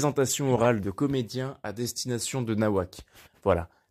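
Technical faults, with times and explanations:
0.51–0.65 s, corrupt frame decoded: a damaged compressed stretch gets played anyway, so misread gains throw energy to wrong frequencies, giving a noisy chirp peaking around -15 dBFS.
1.83–1.91 s, corrupt frame decoded: the same thing again but shorter and quieter, a brief blip near -25 dBFS, likely just a few bad frames.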